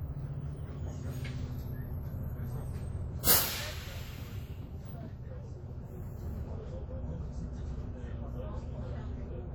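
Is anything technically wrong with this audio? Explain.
Yes. Two faults are audible.

WMA compression affects the whole clip. The sound rings and washes, with a hiss that swells and fades alongside the signal, which points to likely WMA encoding at a low bitrate, around 48 kbps. Long transform blocks smear quantisation noise across tens of milliseconds and zero out weak components. On a spectrogram this appears as patchy, holey detail, though energy still reaches about 20.1 kHz.

Pre-echo occurs from 3.23 to 3.27 s. For about 38 ms before an attack, a short hiss is heard, and the attack itself sounds soft and smeared. The codec spread the noise meant for the loud onset across the quiet stretch preceding it. A waveform shows fuzz ahead of the transient, and a spectrogram shows a broadband haze before it.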